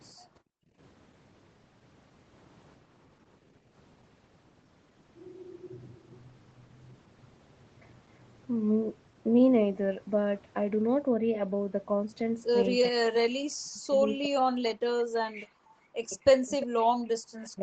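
At 0.17 to 0.24 s the speech dips by roughly 15 dB for a fraction of a second. This is speech suppressed in double talk, likely caused by the echo canceller mistaking the near talker for loudspeaker echo while both sides spoke at once and attenuating everything. On a spectrogram the harmonics thin briefly, and the waveform envelope shows a narrow notch.

From 0.52 to 0.78 s the room tone drops out almost completely, by about 40 dB, for around a third of a second. This is background gated by the echo canceller: the canceller clamped the microphone while the loudspeaker was active and then released it. The waveform goes flat, and the spectrogram shows a dark vertical gap in the noise floor, which returns abruptly.

Double-talk suppression comes back much harder later on. There are bites of roughly 30 dB at 12.9 to 13.1 s and of roughly 40 dB at 13.46 to 13.94 s. A long stretch from 14.16 to 15.7 s is chopped and hollowed, and from 16.07 s to the end the speech breaks into fragments. 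In the waveform the envelope is choppy and gapped. In the spectrogram the upper harmonics vanish first, then whole syllable blocks, below a ceiling near 8 kHz set by the call path.

Echo leak appears at 15.7 s, very faint, and again at 16.6 s, only about 10 dB under the speech, as a delayed ghost. It is likely residual loudspeaker echo that the canceller failed to remove, arriving 349 ms late. On a spectrogram it shows as a weak, smeared copy of earlier formant patterns, offset by about 0.35 s.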